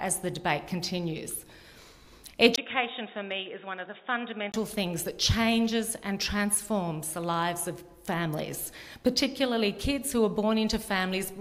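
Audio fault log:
2.56–4.54 s, input switched to a poorer device: the sound turns dull and boxy, with nothing above 3.8 kHz, drops a few decibels in level, and brings in a faint new noise floor well below the signal. A gap of about 20 ms marks the change. The cause is likely a mid-recording switch to another microphone or a headset's call profile, whose narrower band, own tone and own background noise replace the original input until 4.54 s.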